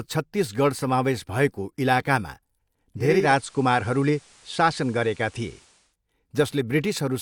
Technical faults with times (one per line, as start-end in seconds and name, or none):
2.96-5.97 digital radio blending to analogue